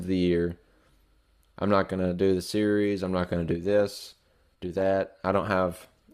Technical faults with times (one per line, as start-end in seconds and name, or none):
3.17-6.13 adaptive stream at a lower bitrate